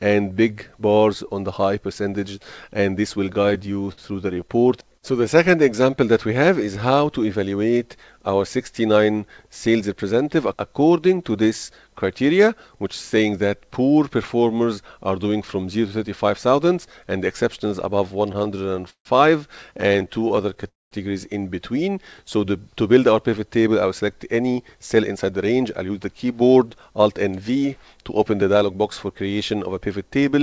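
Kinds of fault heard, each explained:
Repeated stalls (stutter): The jitter buffer kept running dry, so the receiver stretched the last sound to fill each wait. It happens in bursts: 17 gaps at 3.34–4.72 s, 11 at 18.28–19.07 s (longest 151 ms) and 13 at 19.81–20.65 s. Nothing is lost, but the audio drags and judders. A freeze, by contrast, is one longer halt.
Jitter buffer speed-up: Surplus buffered audio was trimmed by cutting many tiny pitch-period slices, so the sound runs quicker at an unchanged pitch. It runs at 111% at 9.67–10.11 s, and at 108% from 23.67 to 28.76 s, shedding close to half a second. Unlike a stall, it hurries the sound rather than dragging it.
Call audio freeze: At 20.68–20.93 s the sound stops, and about 190 ms of near-silence is heard before it resumes exactly where it left off, inserting a 228 ms gap. The likely cause is packets held up in transit. This is a single sustained halt, not a rapid string of short stutters.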